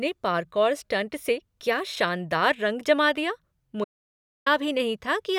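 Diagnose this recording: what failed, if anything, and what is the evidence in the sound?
Audio dropout to silence, 3.84 to 4.46 s, right after "शानदार रंग जमा दिया": the speech cuts to silence with no room tone, likely from a dropped input link.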